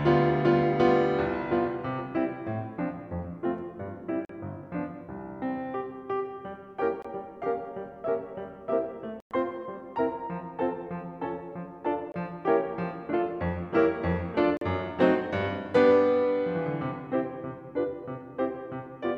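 The music drops to silence at 4.25 s (43 ms), 7.02 s (21 ms), 9.2 s (107 ms), 12.12 s (21 ms) and 14.57 s (43 ms). Playback resumes further on, as if it never stopped. This is likely Bluetooth dropout, with packets arriving too late to play. The gap lengths come in steps of about 21 ms, which fits whole packets going missing.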